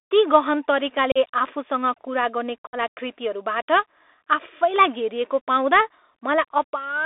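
The Bluetooth CVSD headset codec shapes the speech from start to finish. The sound is confined to a telephone-like band of about 300 Hz to 3.7 kHz, which fits a 64 kbps CVSD link. The codec sends only a rising or falling bit per sample and adapts its step size. Where the speech moves faster than the step can follow, it distorts, and sibilants come out scratchy over a steady granular hiss.

Unconcealed Bluetooth headset packet loss cuts two holes in the speech. The first runs from 1.12 to 1.18 s and drops about 37.5 ms, which fits roughly five lost packets. The second runs from 2.67 to 2.77 s and drops 60 ms, which fits about seven. Nothing was patched into the missing audio, so each gap opens and closes abruptly and the speech comes back quieter for a moment after the break.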